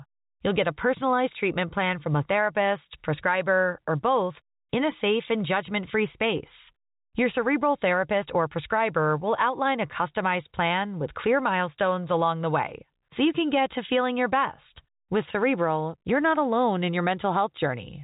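Nothing here goes wrong: the speech comes over a normal G.711 telephone line, so it has that narrow phone-call sound with nothing above about 3.8 kHz.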